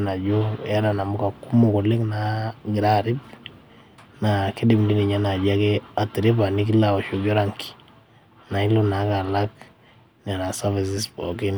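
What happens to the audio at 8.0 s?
Nothing goes wrong at 8.0 s; the speech carries on intact through that moment, with no dropout, click or glitch.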